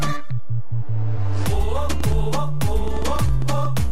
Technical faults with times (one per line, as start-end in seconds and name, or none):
0.00-3.92 DC offset
2.00-3.92 train of clicks